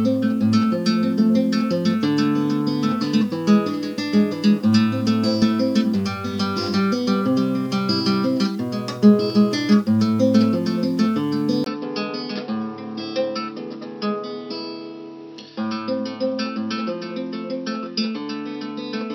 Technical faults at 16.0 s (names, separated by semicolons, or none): input switched to a poorer device